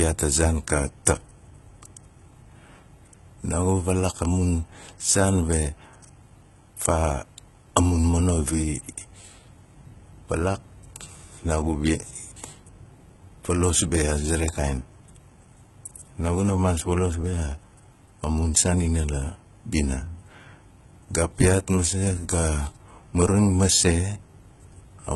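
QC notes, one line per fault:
throughout: HE-AAC compression, gritty lispy sibilants and metallic treble ending near 11.8 kHz, likely heavy band-replicated treble at a rate suggesting 16 kbps.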